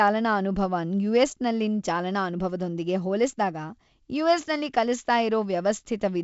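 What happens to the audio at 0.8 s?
Nothing goes wrong at 0.8 s: the speech there simply carries the light, band-limited character of G.722 wideband telephone coding, with nothing above about 7.7 kHz.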